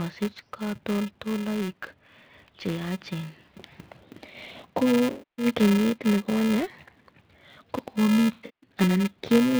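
Throughout the speech, a filter restarted on every block leaves a 375 Hz buzz, which fits a 128-sample block, tracking the signal's level as each block starts from silence. From 5.10 to 5.46 s, and again from 8.32 to 8.70 s, AAC frame loss with concealment replaces lost audio with resynthesised spectrum, giving smeared, phasey patches. The second loss is scattered in several gaps, the longest around 150 ms.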